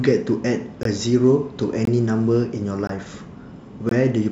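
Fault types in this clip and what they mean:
gap between chunks: The speech was delivered in 1-second chunks with 20 ms of silence left at each join. Nothing is lost, but hard-edged holes interrupt the speech every 1.02 s, starting at 0.83, 1.85, 2.87 and 3.89 s.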